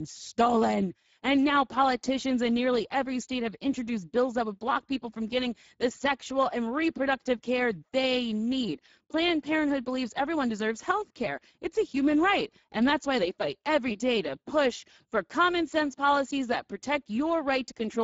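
Speex codec damage runs throughout the speech, plainly audible as a grainy, hoarse texture from starved excitation coding, consistent with about 10 kbps, with nothing above 7.7 kHz.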